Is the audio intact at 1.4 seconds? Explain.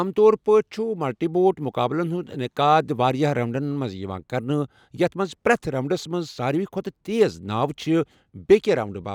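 Yes, the speech at 1.4 seconds is intact, with no dropout, click, distortion or other fault at that moment.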